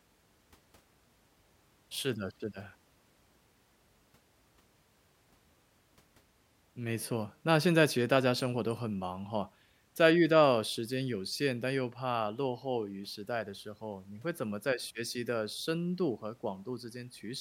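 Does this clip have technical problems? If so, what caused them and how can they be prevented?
No, there are no technical problems in this clip.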